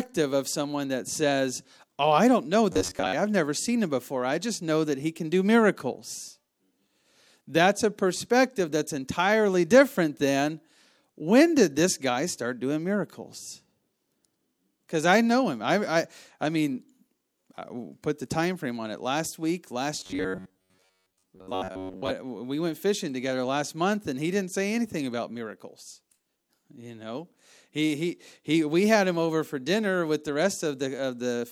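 Robotic sound from repeated short buffers appears at 2.72 to 3.13 s, between "I don't know" and "I've never seen him", and again at 20.00 to 22.13 s. The speech becomes a rigid, metallic buzz at 93.8 Hz that still loosely tracks the words. The likely cause is audio arriving too seldom, so the player loops a segment of about 10.7 ms over most of each stretch while the real audio is skipped.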